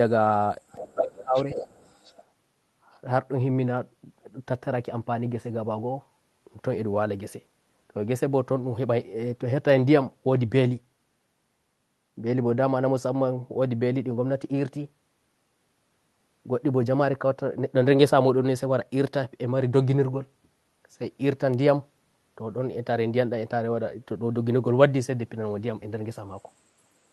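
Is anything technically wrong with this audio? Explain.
Yes, the speech has echo and suppression problems in its first few seconds.

From 0.69 to 0.94 s and again from 1.35 to 2.24 s, the other side's voice is leaking through, about 20 dB and then about 15 dB below the talker. It is likely loudspeaker echo the canceller left in.

Between 0.8 and 1.37 s, speech is suppressed in double talk. The talker dips by up to about 20 dB for roughly half a second, likely because the canceller attenuated everything while both sides overlapped.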